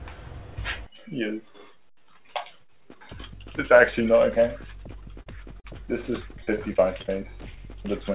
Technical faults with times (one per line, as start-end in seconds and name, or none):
5.22-5.28 short concealed packet loss
5.60-5.66 short concealed packet loss
6.32-7.10 repeated packet loss (robotic sound)
7.52-7.59 short concealed packet loss